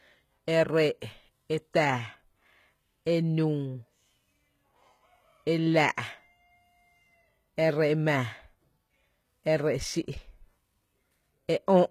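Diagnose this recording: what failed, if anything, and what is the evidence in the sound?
The codec stage failed. Plainly audible damage runs through the whole speech recording, with nothing above 14.9 kHz and gritty, lispy s sounds. The likely cause is HE-AAC compression, whose treble is rebuilt by copying lower bands upward, which fits a bitrate near 20 kbps.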